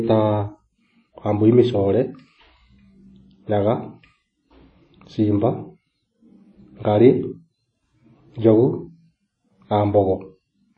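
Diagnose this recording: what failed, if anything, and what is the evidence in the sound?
The codec stage is at fault: plainly audible WMA compression runs throughout this speech, likely from an early WMA encoder at around 32 kbps. Long transform blocks smear quantisation noise into a ringing, washy hiss that swells with the speech, and nothing remains above 10 kHz.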